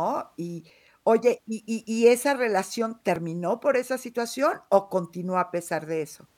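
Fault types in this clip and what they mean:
Dropped buffer (overrun): the software likely read its input buffer too late, so the hardware overwrote it and a slice of audio vanished, its edges joined directly. The speech skips ahead about 20 ms at 0.70 s, and around 50 ms at 3.16 s.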